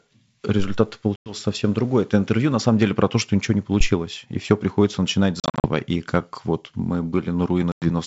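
Packet loss on an ADPCM call at 1.16 s (just before "совсем другой"), 5.40 s (after "и все приходится начинать") and 7.72 s cuts 100 to 160 ms into hard-edged silence. The desynchronised decoder then brings the speech back distorted until it settles.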